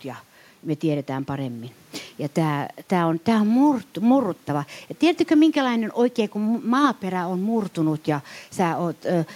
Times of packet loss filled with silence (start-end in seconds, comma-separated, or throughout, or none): none